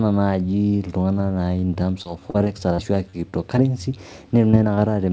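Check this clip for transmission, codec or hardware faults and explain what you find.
Two transmission faults are present: a stretch of repeated packet loss and two short concealed packet losses. The audio has nothing above 8 kHz, which fits a wideband call codec.

Repeated packet loss (robotic sound) runs from 1.74 to 3.59 s. Around ten separate gaps, the longest 40 ms, leave about 180 ms of speech missing. The receiver bridged each hole by extending the preceding sound, so about 12% of the span is synthesised fill. Repeated so closely, those patches make the speech choppy and robotic, with fragments dropped out.

Short concealed packet loss occurs twice, at 4.51 to 4.55 s and at 4.75 to 4.79 s, each losing about 20 ms. In both cases the decoder received nothing for that slot in time and synthesised a continuation from the sound just before, then cross-faded back into the real signal. Each is heard as a brief smear or wobble, and a short consonant at that point can be lost.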